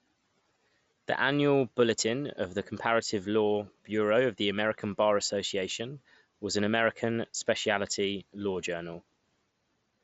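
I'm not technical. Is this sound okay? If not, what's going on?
Yes, no faults heard.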